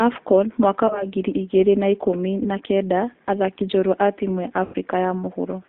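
Throughout, the speech carries G.729 codec coloration. The band runs only from about 250 Hz to 3.7 kHz, which fits an 8 kbit/s G.729A stream. The codec rebuilds each 10 ms frame from a vocal tract filter, a pitch predictor and a few pulses rather than the actual waveform, so the voice comes across plainly rough and synthetic.

Three stretches show VoIP packet loss concealed by the speech codec. At 0.87 to 1.07 s, about 30 ms of audio is missing, consistent with one lost packet. At 2.43 to 2.50 s, another 30 ms gap fits a single packet. At 4.65 to 4.76 s, 90 ms is gone, pointing to three consecutive packets. In each case the decoder extends its last pitch and filter state at falling gain, so the sound is stretched into a buzzy tone or a coloured noise that fades. The disturbance outlasts the gap itself while the decoder's state recovers.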